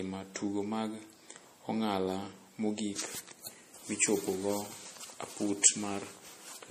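A speech recording with MP3 compression damage running the full length of the clip. Nothing is present above 15.2 kHz, a hard treble ceiling, and the codec artefacts are plainly audible as a watery, swirling texture where weak spectral detail drops in and out between frames. The likely cause is an MP3 encoder starved of bits, which fits a low bitrate in the region of 40 kbps, forcing it to truncate the top band and discard quieter frequency lines.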